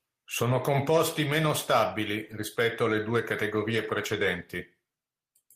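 At 3.71 s, just after "stabili rispetto alle due", the speech turns briefly rougher and noisier until 3.85 s, but nothing drops out. This is a lost packet rebuilt from error correction: the missing audio, about 80 ms of it, was replayed from a low-bitrate copy carried in the following packet. That continuity is what sets it apart from ordinary loss concealment, which smears or fades into a gap; here the sound stays intact, only coarser for that short stretch.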